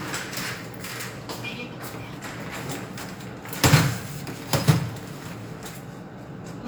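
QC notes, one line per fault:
No faults heard.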